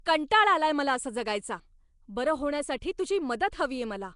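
Nellymoser compression runs throughout this speech clip, with plainly audible damage from start to finish. The sound is rough and hissy around its edges and smeared, with an underwater quality, and nothing is present above 10.6 kHz. The likely cause is the old Flash microphone codec, coding short blocks at a fixed two bits per sample, with weak bands given no bits and filled with noise instead. The bandwidth points to a rate near 44 kbps.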